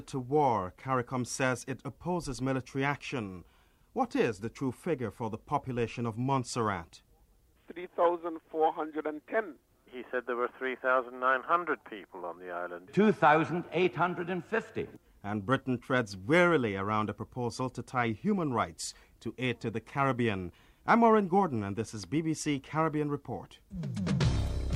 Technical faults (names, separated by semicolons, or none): none